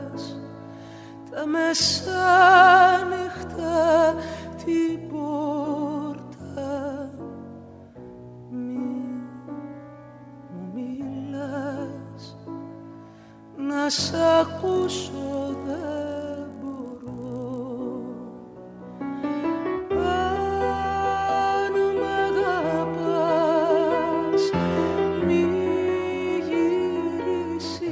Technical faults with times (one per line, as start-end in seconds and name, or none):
14.44-17.60 resampler restarted on every block